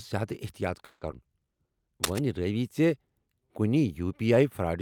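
A speech clip with four separate faults. From 0.85 to 1.03 s a call audio freeze stretches the last sound into a fading buzz for about 160 ms, with a brief silence, likely from late packets emptying the jitter buffer. Nothing is lost, unlike a dropout. At 1.11 to 1.14 s a skip ahead jumps forward, joining the two sides almost directly, with roughly 70 ms of speech cut out rather than paused. From 1.23 to 1.68 s a jitter buffer slow-down repeats pitch periods, playing at 86% speed with unchanged pitch, drawing sounds out by 69 ms, not lowering them like a tape drag. From 2.04 to 2.19 s cable scratch noise adds dense, uneven rustling only slightly below the speech level, likely from a worn connector being moved. Its irregular bursts separate it from a steady hiss.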